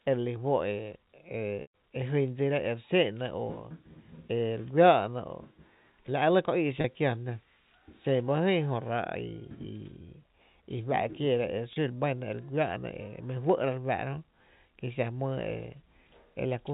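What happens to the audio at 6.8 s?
From 6.81 to 6.84 s, packet loss with pitch repetition bridges a 30 ms gap, fitting one lost packet, by looping the last pitch period. Unlike a silent dropout, it sounds like a brief buzzy hold.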